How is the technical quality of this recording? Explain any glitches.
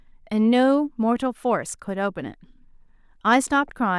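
No technical faults or glitches are audible here.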